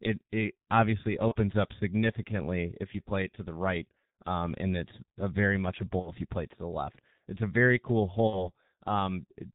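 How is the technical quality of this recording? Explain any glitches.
The technical quality is poor: heavy codec damage throughout, plus three short concealed dropouts.

The whole clip sounds muffled and hoarse with smeared consonants. This is the G.723.1 codec, likely in its 6.3 kbit/s mode, cutting everything above 4 kHz and tracking the voice slowly in 30 ms frames.

VoIP packet loss concealed by the speech codec occurs at 1.28–1.35 s after "it obviously", at 5.99–6.13 s after "a very much a", and at 8.27–8.51 s after "it's a very cool". Each gap becomes a fading buzzy tone or coloured noise, with weak, distorted speech lingering afterwards. The gaps fit one lost 30 ms frame at 1.28 s and two lost frames (60 ms) at each of the later spots, which the decoder filled by extrapolating its last pitch and filter at decreasing gain.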